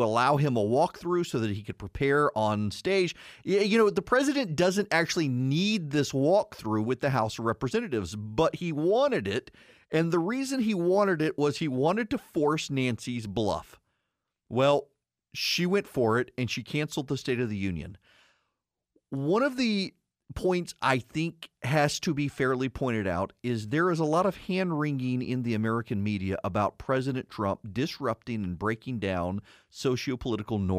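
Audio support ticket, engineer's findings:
Listened through the whole speech recording and nothing turned up worth flagging, so no findings to log on this one.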